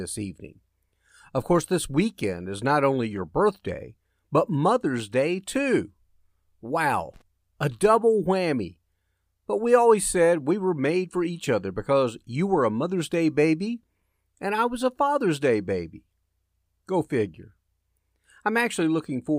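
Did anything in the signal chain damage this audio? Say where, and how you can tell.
Yes. The damage is in the analogue wiring: a loose connector crackle runs from about 7.14 to 7.22 s, an irregular burst of scratchy crackle roughly 80 ms long that cuts across the speech rather than following it. The pattern points to a worn or dirty contact that was disturbed at that moment, briefly making and breaking the circuit. Each break chops the signal, and any DC present on the line turns those interruptions into pops.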